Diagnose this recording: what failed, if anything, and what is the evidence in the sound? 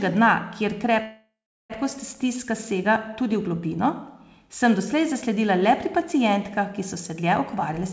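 At 1.02 s the speech stops moving forward and the last sound carries on as a fading buzz that sinks into about 0.36 s of near-silence before the audio resumes at 1.72 s, with nothing lost. This is a call audio freeze at the network stage, most likely from packets held up in transit that let the jitter buffer run empty. The receiver padded the roughly 0.68 s gap, so everything after it plays that much later. The G.722 call path, band-limited at 8 kHz, carries the sound.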